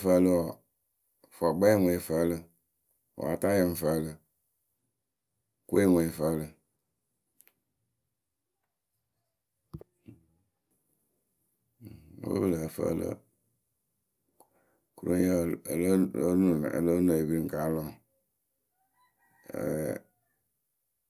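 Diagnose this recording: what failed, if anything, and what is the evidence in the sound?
Nothing failed here; the speech comes through with no audible problem at any stage from capture to playback.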